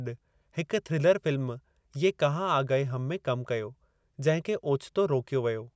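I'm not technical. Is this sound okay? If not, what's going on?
Yes, this recording sounds fine; nothing is wrong with it.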